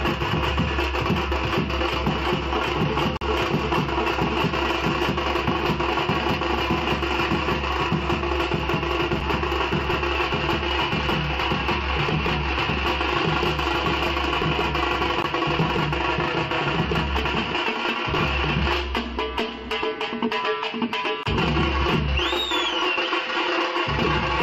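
Silent holes with hard edges at 3.17–3.21 s, 9.20 s, 15.22 s and 21.23–21.26 s recur every 6 s, a gap between stream segments filled with silence; unlike dropouts, nothing is lost and the sound resumes intact.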